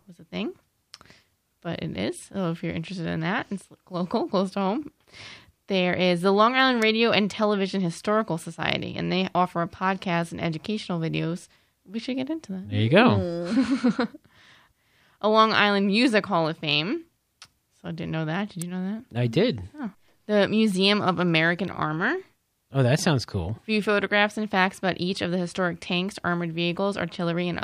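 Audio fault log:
6.82 s and 18.62 s, electrical switching spike: two sharp, dry snaps, each only a few milliseconds long, peaking around -15 dBFS and sitting on top of the speech rather than interrupting it. The second comes just before "you know that I". The abrupt onset and lack of any tail suggest an arc from a nearby switch, relay or static discharge, likely induced into the audio line as a brief voltage burst.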